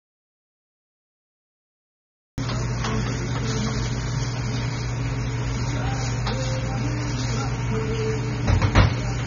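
From the first instant to 2.38 s the clip is an audio dropout to silence. The gap is already under way when playback begins, and it is silent with no room tone or noise floor at all. The sound then enters abruptly mid-flow rather than fading in. Pure silence of this kind most likely means the input signal was lost, through a disconnected source, a failed link or a mute, while the recorder kept writing empty samples.

Once the sound arrives, AAC compression damage is plainly audible through the rest of the clip. Nothing is present above 6.9 kHz, so the top end is dull and closed-in. Within the remaining band, detail is smeared, and sustained or noisy parts take on a warbling, fizzy texture where the encoder has discarded or roughly substituted spectral content. The low cut-off and the coarse artefacts fit AAC-LC at roughly 24 kbps, likely from a low-bitrate encode somewhere in the chain.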